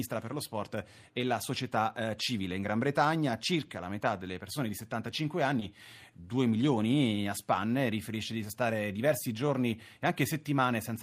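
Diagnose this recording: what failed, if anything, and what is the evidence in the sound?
Network stage. Short concealed packet loss at 5.59 to 5.63 s. About 20 ms never arrived. The decoder extended the preceding sound, leaving a brief smear.

Codec stage. A lost packet was rebuilt from error correction at 5.61 s. The next packet carried a low-bitrate copy, so one 20 ms frame sounds rougher and noisier.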